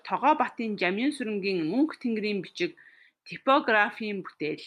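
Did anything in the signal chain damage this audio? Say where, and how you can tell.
No, nothing in the chain audibly damaged this speech.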